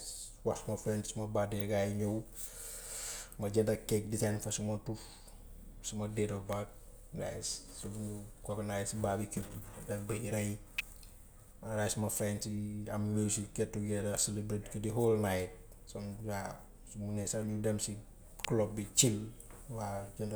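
Electrical switching spikes snap across this speech clip at 1.6, 6.53, 10.78 and 18.45 s, each a sharp, very brief click laid on top of the sound rather than replacing it. The first three peak at roughly -20 dBFS and the last is a little louder, near -15 dBFS. The likely cause is a nearby switch, motor or static discharge arcing and coupling a short burst of interference into the audio line.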